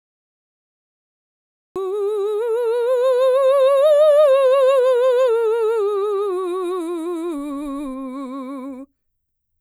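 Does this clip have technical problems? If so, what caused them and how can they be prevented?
Yes: a cut-off start, where capture began late, leaves digital silence until 1.76 s, then the music enters mid-sound with no natural attack. Start recording before playback begins and leave a short lead-in.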